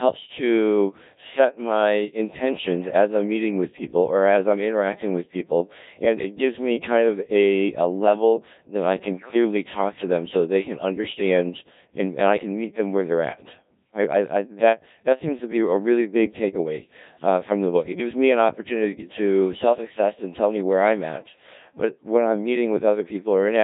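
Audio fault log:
Throughout: Codec 2 vocoder. The speech comes out robotic and buzzy, heavily damaged, consistent with a very low rate near 1.3 kbit/s. Only pitch, voicing, energy and spectral envelope survive, then sine-wave resynthesis rebuilds the voice, unlike ordinary codec smearing, which keeps the waveform.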